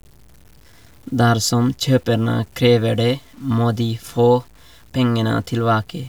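Low bit depth without dither runs through the whole speech clip, heard as grainy distortion that rides on the speech and changes with it, sitting roughly 35 dB below the signal. The likely cause is samples being cut to 8 bits by truncation with no dither added, so the rounding error tracks the waveform instead of spreading as steady hiss. Quiet stretches turn gritty, and the faintest tails sputter between two levels or fall to silence.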